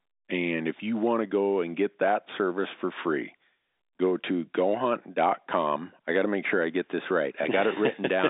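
Nothing in this speech recording stands out as a fault, and what you hear is the usual narrow sound of an ordinary phone line using G.711 telephone coding, with the band running from about 250 Hz up to 3.7 kHz.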